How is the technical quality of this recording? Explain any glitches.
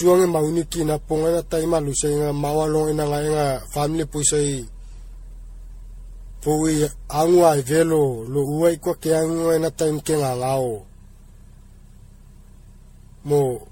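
The technical quality is compromised by one fault that runs through the whole recording: generation loss. The speech has a swirly, smeared, hollow character, consonant attacks are blurred, and nothing is present above about 16.5 kHz. The likely cause is repeated lossy re-encoding, with the artefacts pointing to an MP3 at around 64 kbit/s passed through the codec something like ten times. Each decode and re-encode quantises the signal again on a shifted frame grid, so noise and spectral holes accumulate beyond what a single pass at that rate would produce.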